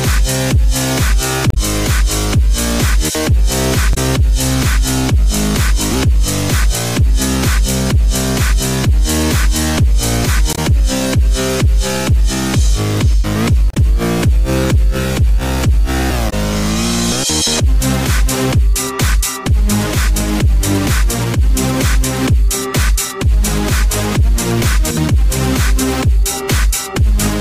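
Damaged data in a compressed stream at 1.50, 3.91, 10.52, 13.70 and 16.29 s: brief glitches, each 70 ms or less, as the decoder misreads corrupt frames and resyncs.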